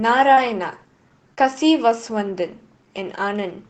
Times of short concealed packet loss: 0.33-0.39, 1.35-1.39

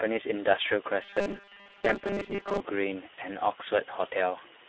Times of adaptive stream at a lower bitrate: none

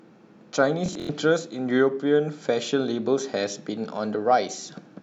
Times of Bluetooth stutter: 0.86-1.09

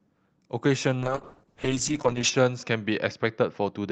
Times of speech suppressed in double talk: none

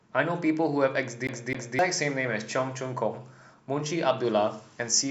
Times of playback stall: none

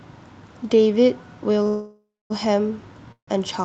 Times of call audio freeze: 1.67-2.32, 3.12-3.29

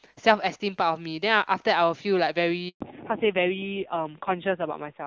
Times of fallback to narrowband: 2.81-5.07

